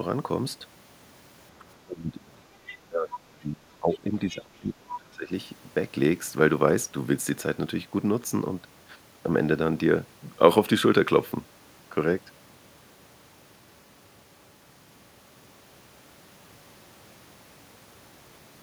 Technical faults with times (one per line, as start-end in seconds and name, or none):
1.59-2.20 speech suppressed in double talk
2.66-2.76 other side's voice leaking through
2.87-5.31 speech suppressed in double talk